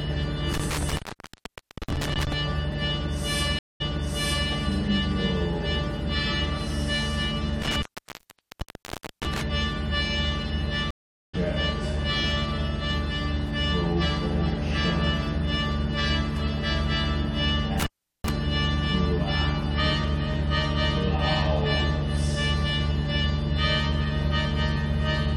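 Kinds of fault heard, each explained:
Intermittent contact: at 0.53–2.33 s, 7.62–9.42 s and 17.80–18.30 s a loose connection opens the line and the audio drops out for about 0.91 s, 1.40 s and 0.37 s respectively. Crackle marks the edges of each gap as the contact breaks and remakes, and faint hiss remains while the circuit is open.
Stream reconnect: at 3.59–4.50 s and 10.91–11.35 s the connection fails, the player goes silent, then reconnects and starts a fresh decoder mid-stream, with the first frames muted or fading in. The first silence lasts 212 ms, and the audio comes back 0.70 s earlier, repeating material already heard. The second lasts 429 ms, and the audio resumes roughly 0.3 s later, so a short stretch is skipped.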